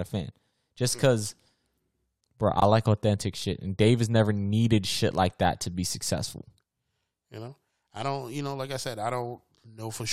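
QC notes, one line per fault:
2.56 to 2.62 s and 3.38 to 3.44 s, chunks out of order: each is a brief jumbled stutter, the first just before "like authentic" and the second just after it. In each 60 ms stretch, one 20 ms chunk arrived late and plays two chunks behind its proper place. Nothing is missing, but the sound steps back in time, and there are three hard joins where the sequence breaks.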